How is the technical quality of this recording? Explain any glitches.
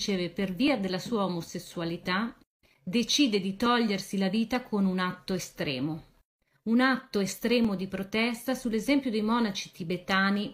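A regular ticking fault runs through most of the recording: about ten clicks, spaced every 1.0 s from 0.68 s to 9.64 s. These are clock drift buffer slips, likely from two devices whose clocks differ by roughly 700 ppm. The buffer between them drifts until a block of a few dozen samples is dropped or repeated. Their steady metronome-like spacing distinguishes them from random dropouts or packet loss.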